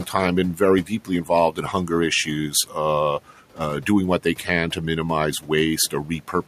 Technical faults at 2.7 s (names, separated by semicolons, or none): speech cut by the noise suppressor